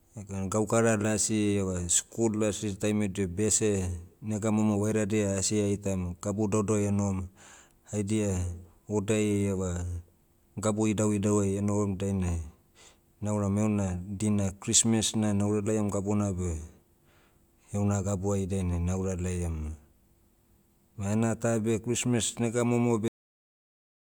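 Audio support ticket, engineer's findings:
Cut-off end at 23.08 s. Speech stops mid-sound right after "nega momo". Abrupt drop to digital silence, no decay, through the last second. Probable component: playback or capture buffering. Final buffers never written or played, truncating the stream before the sound could finish.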